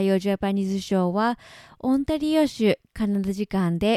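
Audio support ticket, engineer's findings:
Engineer's findings: no audio fault identified in the speech clip; no component implicated and no action required for this ticket.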